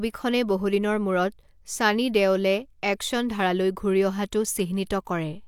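No technical faults can be heard anywhere in this speech recording. Nothing in the signal calls for comment.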